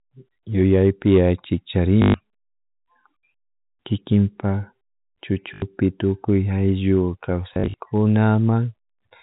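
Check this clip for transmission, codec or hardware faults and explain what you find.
There is one transmission fault, packet loss with last packet repeated, heard three times in this telephone-band speech. The G.711 coding itself holds the sound below 4 kHz as expected.

At 2.02 to 2.14 s, 5.54 to 5.62 s and 7.54 to 7.74 s, the sound turns into a short robotic stutter, buzzing near 50 Hz. The third event is broken up, with runs of up to 40 ms spread over 200 ms. Missing stretches of 120, 80 and 120 ms were filled by replaying the previous packet, which fits 20 ms packets.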